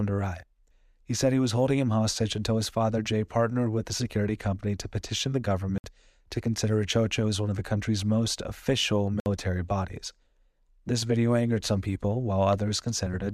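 At 5.78 s, right after "company to petition the" and before "to consider", the speech drops into a block of digital silence lasting 60 ms, and a second identical 60 ms hole follows at 9.2 s after "the country's most official". Each time, samples were zeroed, likely because the output buffer wasn't filled in time. On a waveform it's a nearly flat line; a spectrogram shows an empty vertical band.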